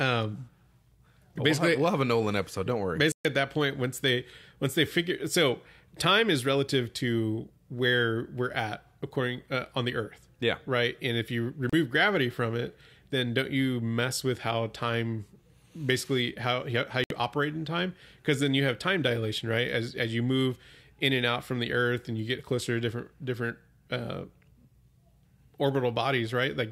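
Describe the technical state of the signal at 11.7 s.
A digital broadcast dropout occurs from 11.70 to 11.73 s, right after "if you" and before "gravity from it then". The receiver stopped getting valid data, either because the signal faded or because a frame failed its checksum, so it muted output until clean frames arrived again. The gap lasts about 32 ms, which fits a single lost frame. The speech simply cuts to a brief silent hole and resumes, with that slice of the programme gone for good.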